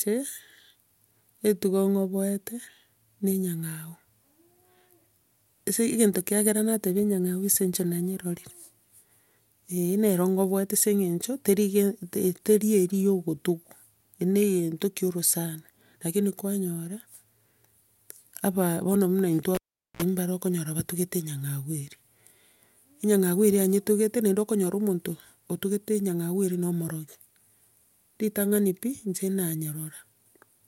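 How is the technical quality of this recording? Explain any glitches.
There's one real glitch in this speech recording: a cable pulled and plugged in at 19.55 to 20.02 s. A pop cuts the sound to near silence for about 0.42 s, then a 52 ms burst of 60 Hz mains buzz as the plug's tip touches first, and another pop when the signal reconnects.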